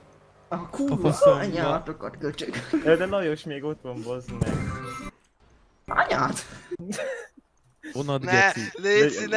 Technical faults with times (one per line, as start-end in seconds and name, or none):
none